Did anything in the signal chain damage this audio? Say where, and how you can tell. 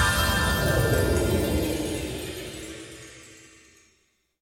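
Yes, compressed frames were skipped at the codec stage: brief smeared blips at 2.60 and 3.86 s, where the sound jumps ahead about two 23.2 ms frames, roughly 50 ms.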